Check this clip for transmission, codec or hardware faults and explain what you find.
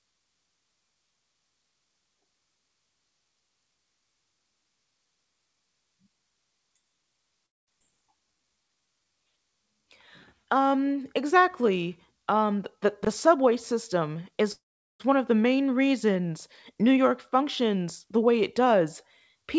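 Several delivery faults from a call path are audible. The speech passes through a codec with nothing above 8 kHz, which fits G.722.

Call audio freeze, 7.46 to 7.70 s and 14.52 to 15.02 s, before "one of the main". The sound stalls into near silence, about 210 ms and 400 ms. Delayed packets likely starved the jitter buffer, and nothing is lost.

Skip ahead, 7.80 to 7.82 s. Roughly 150 ms of speech vanishes. Dropped audio makes playback jump forward, joining both sides almost directly.

Jitter buffer slow-down, 8.21 to 9.12 s. Repeated pitch periods add 135 ms, so speech runs at 86% speed with unchanged pitch and sounds drawn out.

Jitter buffer speed-up, 12.35 to 12.86 s at 109%, 13.27 to 14.41 s before "one of the main" at 107%, and 16.75 to 18.81 s after "of the main reasons" at 107%. Removed pitch periods shorten the speech, so it sounds hurried at the same pitch.

Chunks out of order, 13.03 to 13.07 s. 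A 20 ms chunk plays one chunk late. The misordered joins cause a brief jumbled moment.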